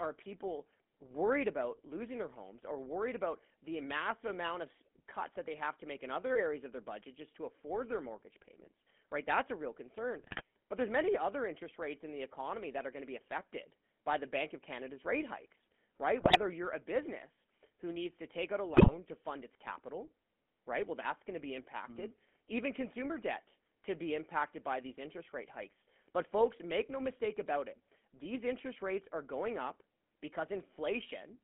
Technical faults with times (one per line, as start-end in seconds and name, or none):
0.00-31.43 GSM full-rate codec
10.18-10.42 GSM bit errors
16.20-16.39 GSM bit errors
18.74-18.93 GSM bit errors